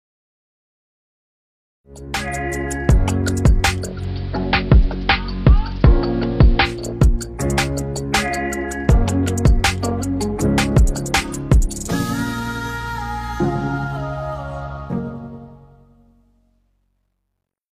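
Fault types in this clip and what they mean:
digital radio blending to analogue: From 3.79 to 6.90 s the receiver loses its digital stream and cross-fades over about a quarter second to the AM broadcast. Soft hiss appears, and level shifts about 2 dB. Unlike a dropout, the sound never stops.
truncation distortion on a fade: The fade-out beginning around 14.7 s is carried at only 12 bits without dither. From 14.74 s the quiet tail turns gritty, and from 16.54 s to the end the grit is at its worst. Unlike steady hiss, this grit moves with the signal.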